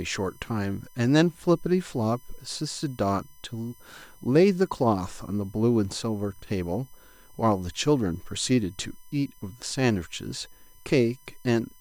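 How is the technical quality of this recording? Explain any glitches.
A steady USB whine runs under the speech for the whole recording. It is a thin, fixed-pitch tone built on 1 kHz, with its strongest component at 12 kHz and sitting roughly 30 dB below the speech. The bus draws current in 1 ms frames, and that pulsing leaks in through power or ground as a 1 kHz series of harmonics.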